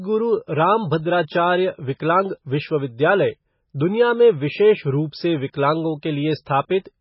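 From start to finish the speech carries heavy damage from what is likely MP3 compression, starved for bits. Nothing comes through above 5.6 kHz, so the treble is simply chopped off, and the remaining detail sounds watery and swirly as quieter frequency components flicker in and out from frame to frame. S sounds turn chirpy and metallic, and consonant onsets smear. That degree of damage fits a very low bitrate, somewhere around 16 kbps.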